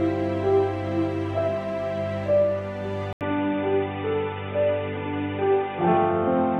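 At 3.13 s the audio drops out for about 80 ms, then returns narrower and duller, with nothing above 3.8 kHz, and stays that way to the end. The level stays about the same, but a faint new background noise sits well below the signal. This points to an input switched to a poorer device, likely a change of microphone or a headset call profile partway through, with the new device's band limit, tone and noise replacing the original.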